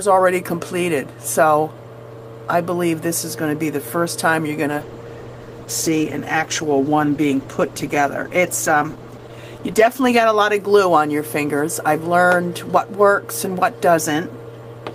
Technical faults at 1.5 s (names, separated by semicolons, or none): none